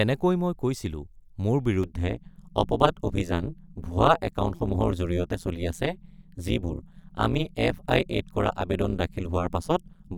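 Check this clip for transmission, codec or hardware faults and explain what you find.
One fault is present, an overlap-add ripple, running from 1.83 s, just after "মই কৈছিলোঁ মোৰ", to the end of the clip. The speech was split into windowed frames and rebuilt with an overlap whose windows fail to sum to a steady gain, so the level swings once per frame, at around 150 Hz and by about 60 dB. That deep, fast modulation gives the voice a harsh metallic buzz, with extra tones around each note, laid over everything that follows.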